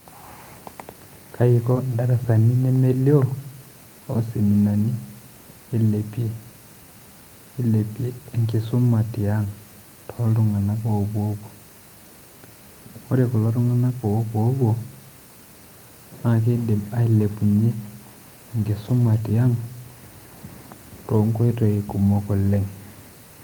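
At 1.73 to 1.77 s, about 20 ms of the speech arrived too late for the decoder, so short concealed packet loss filled it by extending the preceding sound for roughly 16 ms before blending back. The result is a brief smear.

Overlapping that, from 1.75 to 1.77 s, a lost packet was rebuilt from error correction: the next packet's low-bitrate copy stood in for 20 ms. Further rebuilds follow at 13.87 to 13.93 s (40 ms, just after "ore kulo") and 18.85 to 19.19 s (180 ms, spread over nine separate packets). Each sounds rougher and grainier than its surroundings without dropping out.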